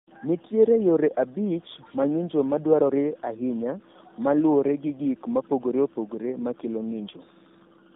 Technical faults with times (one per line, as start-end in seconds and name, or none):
0.00-7.96 tandem speech coding